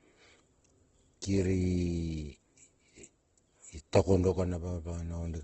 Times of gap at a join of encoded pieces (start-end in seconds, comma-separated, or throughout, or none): none